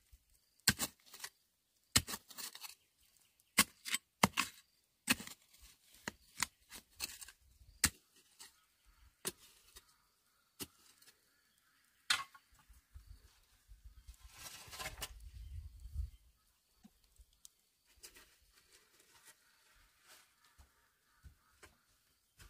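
Damaged data in the compressed stream makes the decoder misread frames and hunt for sync, producing brief glitches at 8.27–8.30 s and 16.79–16.89 s.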